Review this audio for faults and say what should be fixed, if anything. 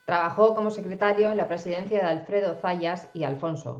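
Computer activity noise runs under the whole clip: a faint buzzy chirp pulsing at around 500 Hz, roughly 35 dB below the speech. It rises and falls with whatever the machine is doing, not with the talking, so it's load current from the CPU, GPU or mouse shifting the ground the audio circuit shares. To prevent it, move to a USB interface or external preamp with its own clean ground, or add a ground-loop isolator.

There's a call bitrate drop from 0.9 s to the end. The audio goes coarse and watery, and the top end gets cut: content that reached 20 kHz now stops near 12 kHz. That sounds like Opus being pushed down from roughly 32 kbps toward 13 kbps after the bandwidth estimate fell, with the worst stretch lasting about 1.07 s. The connection is the thing to fix here. Use a wired link or raise the minimum bitrate floor so the encoder can't starve when the estimate dips.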